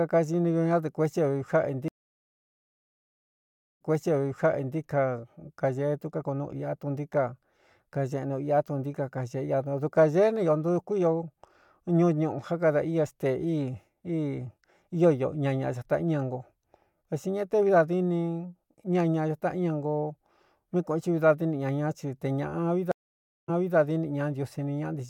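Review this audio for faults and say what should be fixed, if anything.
The speech drops out twice and comes back repeating what was already heard. From 1.88 to 4.78 s there is about 1.9 s of silence, then the audio resumes roughly 0.98 s earlier in the speech. From 22.92 to 23.76 s a 0.57 s gap is followed by a jump back of about 0.28 s. Each is a stream reconnect: the connection broke, the player restarted its decoder mid-stream, and the server resent a burst of already-played audio. Fix this by keeping a larger client buffer and resuming from the last played position, discarding any resent audio that overlaps it.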